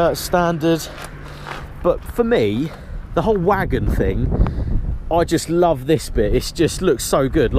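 No dropouts, distortion, timing errors or other technical faults can be heard anywhere in the recording.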